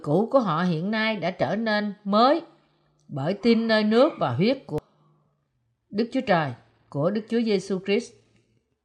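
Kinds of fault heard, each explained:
Damaged data in a compressed stream: at 4.78 to 4.82 s, corrupted bytes make the decoder misread frames and lose sync, producing a brief glitch.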